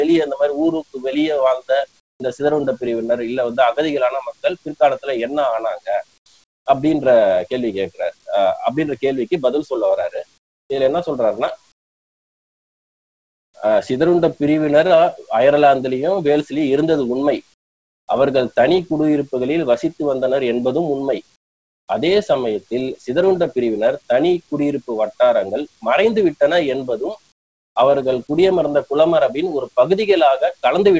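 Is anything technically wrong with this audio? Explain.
Yes. There is comfort noise in place of the background at 2.00–2.20, 6.18–6.26, 6.44–6.66, 10.38–10.70, 11.72–13.54, 17.54–18.08, 21.36–21.88 and 27.32–27.76 s. In each gap the real background gives way to a flat, featureless hiss about 17 to 26 dB quieter. The likely cause is discontinuous transmission: the sender stops sending in pauses, and the receiver fills them with synthetic noise. Throughout the clip, nothing is heard above 8 kHz, which fits a wideband call codec.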